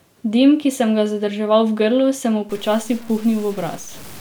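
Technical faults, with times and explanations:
2.49–4.20 s, low bit depth without dither: the speech turns gritty and grainy, with quiet tails sputtering or dropping out. Unlike steady hiss, this grain follows the signal. It likely comes from truncation to 6 bits without dither, with error roughly 25 dB below the signal.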